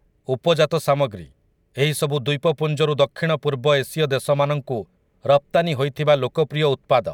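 Nothing in the speech stood out as a technical fault on listening.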